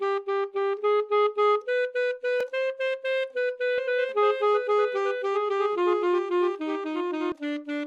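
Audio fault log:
2.40 s, block of digital silence: a sharp tick where the sound drops to silence for about 2.7 ms and snaps back with no fade. This fits one 128-sample buffer left unfilled because the output was not written in time.
3.78 to 7.32 s, doubled audio track: a dry, full-band repeat of the sound trails about a second behind, roughly 5 dB quieter, with no decay or room colour, and it starts and stops abruptly. This is likely a second copy captured through a slower path.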